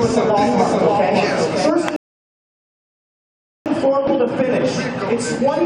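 Doubled audio track, from the very start to 1.7 s: a second full-band copy runs about half a second behind the original and about 5 dB quieter, with no decay or room colour, then stops abruptly. The likely cause is a second, slower capture path mixed in.

Rebuffering stall, from 1.96 s to 3.66 s: the player ran out of downloaded audio, so the sound drops to silence for 1.7 s and then resumes exactly where it left off. Nothing is lost, but the stall adds that time to the clip.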